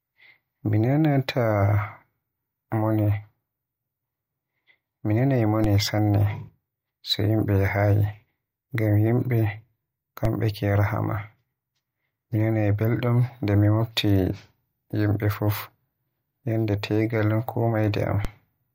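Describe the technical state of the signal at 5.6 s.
A DC step at 5.64 s shifts the zero line by about -14 dBFS: a low thump, decaying through a 20 Hz high-pass, while speech continues unbroken.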